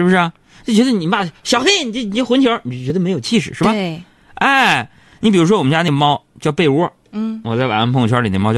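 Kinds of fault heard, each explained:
Audio missing between chunks: short skips of roughly 20 ms at 2.90 and 5.88 s, spaced 3 s apart, likely lost where recording chunks are joined.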